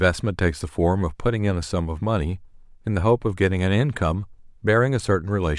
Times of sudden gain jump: none

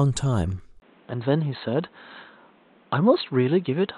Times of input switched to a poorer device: 0.80-3.97

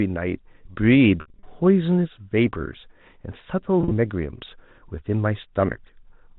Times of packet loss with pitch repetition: 1.21-1.43, 3.81-3.91

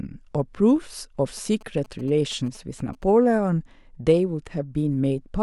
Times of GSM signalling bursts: 1.37-3.04

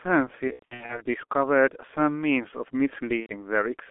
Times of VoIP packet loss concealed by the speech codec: 0.47-1.02, 3.20-3.32

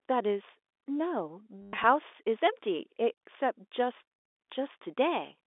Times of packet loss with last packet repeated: 1.62-1.84

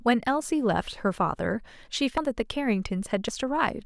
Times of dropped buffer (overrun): 1.15, 2.18, 3.29

